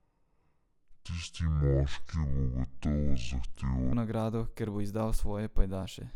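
From 0.00 to 3.93 s, before "nagrado ker bo izdal", the speech sounds deep and dragging, roughly ten semitones low. It is a section at the wrong speed, likely slowed to 0.537 times.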